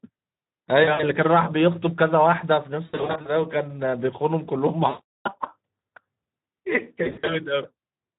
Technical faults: Speex codec; VoIP packet loss concealed by the speech codec

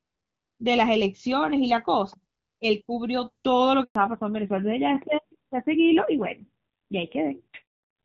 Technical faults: handover gap; fallback to narrowband

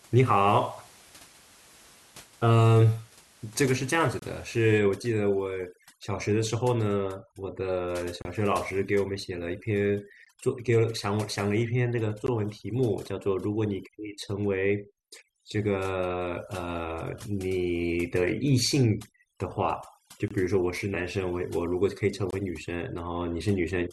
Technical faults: gap between stream segments; overdone noise removal

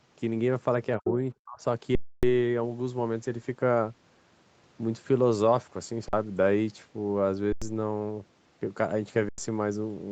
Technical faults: speech suppressed in double talk; underrun with held sample

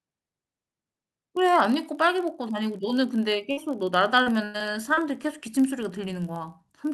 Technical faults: block size mismatch (padded); burst of packet loss; repeated packet loss (robotic sound)

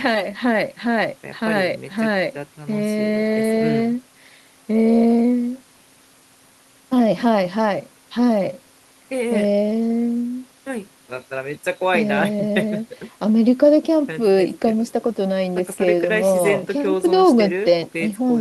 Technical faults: none

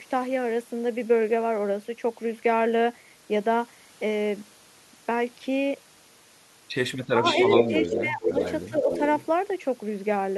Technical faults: speech suppressed in double talk; echo leak

